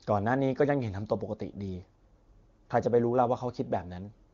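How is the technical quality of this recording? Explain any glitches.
No glitches here; the wideband HD Voice speech sounds clear.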